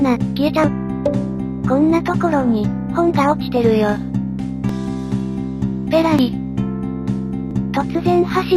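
The audio skips ahead abruptly four times, at 0.64, 4.69, 6.19 and 7.51 s. No gap of silence appears. Roughly 70, 20, 40 and 20 ms of sound are missing, and the sides join directly. The likely cause is a dropped buffer (overrun) each time.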